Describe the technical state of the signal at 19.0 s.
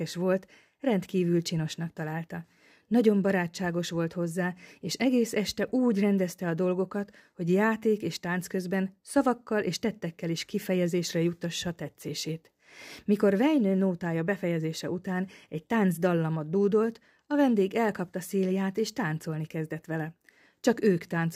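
At 19.0 s the signal is intact, with no audible technical fault at that point.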